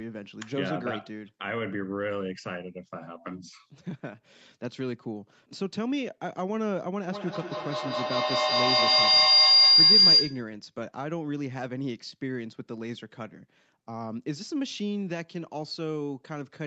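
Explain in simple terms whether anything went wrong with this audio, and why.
Something went wrong from 7.07 to 10.56 s: a feedback howl. Sound leaked from a loudspeaker back into a microphone on the same call, growing louder each trip, until it became a shrill tone near 5 kHz, with the sound coming back around about every 0.2 s, louder than the speech.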